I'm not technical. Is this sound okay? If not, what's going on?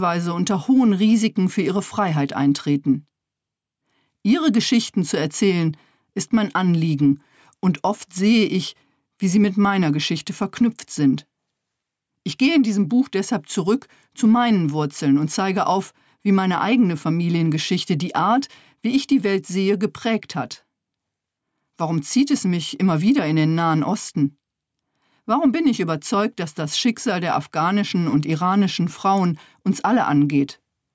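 No, there's gain pumping all the way through. Loud and soft parts end up closer in level than they should, so the sound is squashed. The likely cause is the input set far too high, with a limiter constantly pulling it back down.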